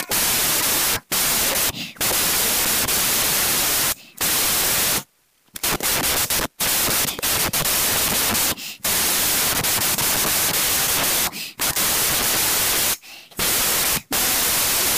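Throughout, 16-bit samples are read as packed 24-bit, a wrong sample width. The speech plays 1.5 times fast, raised in pitch, and is buried under loud noise.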